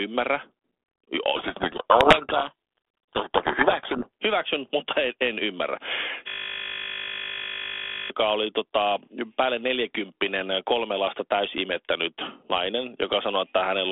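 You've got speech over a telephone line here, limited to roughly 300 Hz to 3.5 kHz and carried by G.726 ADPCM, with only light codec grit that fits the 32 kbit/s DECT-style rate. From 1.36 to 4.09 s there's a codec payload misread. The receiver unpacks each G.726 code word with its bits in the wrong order, so the decoder builds its adaptive prediction from scrambled differences and the speech drowns in harsh distortion until things line up again, right before "hyväksyn mutta en en". Then, just after "mutta en en ymmärrä", a system hang loop starts at 6.28 s. The machine or driver froze while the audio hardware kept replaying one 20 ms buffer, so that tiny slice repeats exactly about 90 times and you hear a steady 50 Hz buzz instead of speech. It runs until 8.10 s, when normal audio resumes with "oli tota päälle neljäkymppinen".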